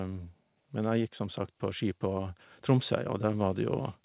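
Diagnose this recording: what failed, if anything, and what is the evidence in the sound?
Call processing stage: automatic gain rising from 0.05 to 3.92 s adds about 6 dB. Speech and background swell together gradually, unlike compression pumping on each syllable.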